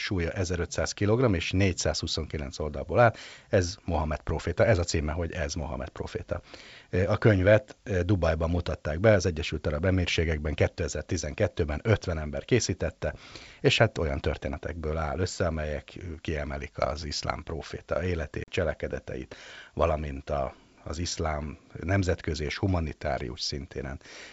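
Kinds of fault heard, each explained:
Packet loss on an ADPCM call: a couple of lost packets were filled with silence, putting the decoder's predictor and step size out of step with the sender's. After "iszlám proféta" the sound cuts out for about 40 ms, then returns slightly distorted.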